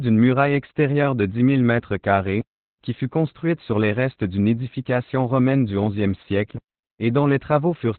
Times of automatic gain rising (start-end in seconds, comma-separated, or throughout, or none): none